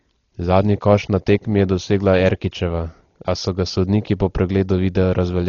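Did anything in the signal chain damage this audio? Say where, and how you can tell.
Yes, at the codec stage, and it runs the whole way through this speech. Nothing comes through above about 6.9 kHz, so the top end sounds dull, and there's a rough, fluttery noise clinging around the voiced parts. That pattern points to heavy Dolby Digital compression, likely at a bitrate around 32 kbps: the encoder narrows the band and starves many frequency lines of bits, and the decoder fills those gaps with dither noise.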